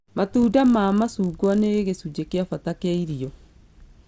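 A steady buzz at 50 Hz runs through the whole clip, riding on the speech and vanishing in the gaps between phrases. This is a resampler restarted on every block: the audio was converted in 20 ms chunks, which fits a conversion from 48 kHz down to 16 kHz, and each chunk was filtered without its neighbours. The resulting small error at every boundary repeats 50 times a second, merging into a buzz rather than separate ticks.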